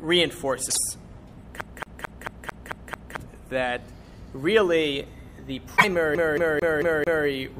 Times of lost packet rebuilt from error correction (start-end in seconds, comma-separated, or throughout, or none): none